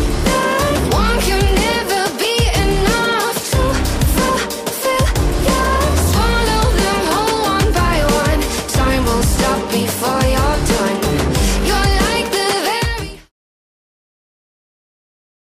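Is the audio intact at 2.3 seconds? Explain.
Yes, the audio is intact at 2.3 seconds, with no dropout, click, distortion or other fault at that point.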